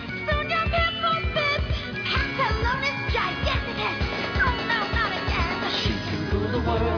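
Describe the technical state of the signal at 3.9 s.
At 3.9 s the signal is intact, with no audible fault at that point.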